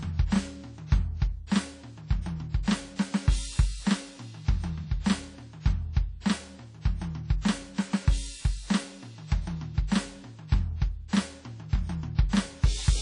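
From start to finish the music carries WMA compression damage, and it's plainly audible: a ringing, washy smear with hiss pumping along with the level, and nothing above about 10.1 kHz. That points to a transform codec likely run at a low bitrate, around 32 kbps.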